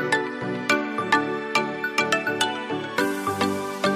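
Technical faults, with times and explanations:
No technical faults detected; nothing to log.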